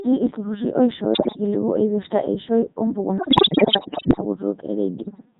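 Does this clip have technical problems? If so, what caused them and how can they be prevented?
Yes. The whole speech clip passes through a Codec 2 vocoder at 3.2 kbit/s. The decoder rebuilds the voice from sine waves, giving heavy robotic buzz. Use a higher-bitrate waveform codec instead.

From 3.18 to 4.21 s, bit errors on digital voice radio corrupt the vocoder frames at a high error rate. The voice jumps in pitch and level and warbles. Stronger signal or error correction prevents this.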